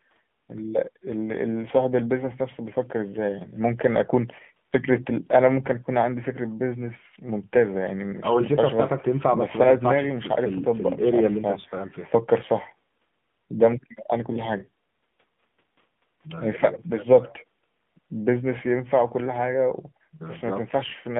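Speech carried through an AMR narrowband mobile codec for its whole length. The band is confined to roughly 150 Hz to 3.6 kHz, and plainly audible buzzy, synthetic coding damage points to a low AMR-NB mode around 7.4 kbps, where the pulse-excited vocal-tract model is coarsely quantised.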